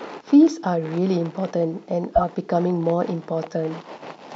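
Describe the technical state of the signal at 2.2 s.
At 2.2 s the signal carries a corrupt frame decoded, from 2.15 to 2.23 s. Damaged bits in a few consecutive compressed frames were decoded anyway, so misread gains put energy at wrong frequencies, producing a loud chirp, blip or burst of noise peaking around -5 dBFS over the speech.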